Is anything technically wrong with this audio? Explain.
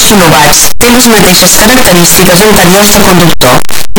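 Yes. Throughout the whole clip, the speech is buried under very loud, harsh distortion. The sound fits signed and unsigned samples being mixed up in the 8-bit stream, likely the cause here. Flipping the top bit turns every zero crossing into a leap across the full range. The waveform becomes a string of large square-edged jumps. Quiet stretches come out as loud as the rest.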